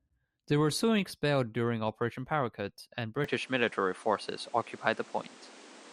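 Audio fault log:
3.24–5.92 s, input switched to a poorer device: sound turns duller above 10.5 kHz, shifts level by about 5 dB, and gains new background noise about 30 dB below the speech, likely from another mic.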